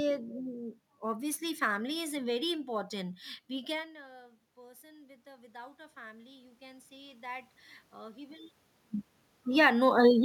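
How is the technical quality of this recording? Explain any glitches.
The recording has two technical faults: a constant roughness from sample clock jitter, and two stretches where automatic gain rising pulls the level up.

Sample clock jitter runs through the whole clip. The speech carries a faint hiss or grain that thickens on loud passages and bright, sharp sounds such as sibilants, and drops away in the pauses. The converter's clock wanders by a couple of microseconds, so each sample lands slightly off time. The error grows with how steeply the waveform is changing, which places this roughness around 30 dB below the speech itself.

Automatic gain rising first appears from 2.73 to 8.59 s. Just after the start, near 3.5 s, the talker moves back from the microphone and the input falls by 24 dB. The gain control responds by raising its gain 11 dB over almost six seconds. The speech slowly swells back up, and the room noise swells with it. 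The room noise belongs to the recording space and is not a system fault. The slowness of the recovery comes from the control loop. A second, smaller rise of 3 dB happens between 9.69 and 10.09 s, a short lift in both speech and background level near the end.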